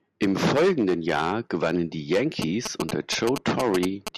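Right after "gewannen die", at 2.42 s, GSM signalling bursts come in and run to about 4.09 s: a galloping dit-dit-dit of short buzzes at about 217 Hz. A nearby 2G phone's radio bursts get rectified by the audio circuit, landing only a little below the speech.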